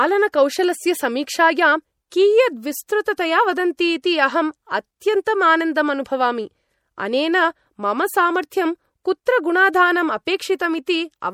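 Throughout, the speech sounds watery and swirling and has nothing above 18.8 kHz, likely MP3 compression at a low bitrate near 64 kbps, which drops weak frequency lines.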